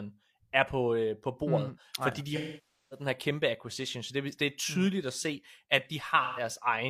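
A speech clip with two dropouts that sound like AAC frame loss with concealment. From 2.35 to 3.06 s, after "bordet mm fordi de", the decoder keeps rebuilding from the last good spectrum. The sound goes smeared and noisy, sags toward silence and fades back in before "her kæmpe acquisition så". The roughly 0.55 s gap fits about 13 lost frames. A shorter patch at 6.24 to 6.43 s, after "mm at se at", just sounds phasey and blurred.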